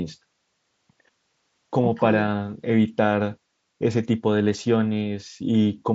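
Nothing goes wrong anywhere in this speech, which comes through a Bluetooth mSBC headset link that holds the sound to its usual wideband ceiling of about 8 kHz.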